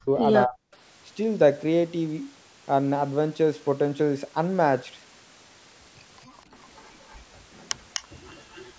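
At 0.0 to 0.19 s and 0.46 to 0.59 s the speech dips sharply, by about 35 dB and then 25 dB. This is likely speech suppressed in double talk, and it appears as waveform notches and faded spectrogram bands.

An echo leak follows at 0.73 to 0.77 s, 6.63 to 6.83 s, 7.02 to 7.18 s, 7.58 to 8.03 s and 8.28 to 8.68 s. A copy trails the speech by 0.25 s, likely from an echo canceller letting loudspeaker sound through. It is loudest at 7.58 s, about 10 dB below the speech, and shows as a delayed, fainter duplicate of the speech pattern.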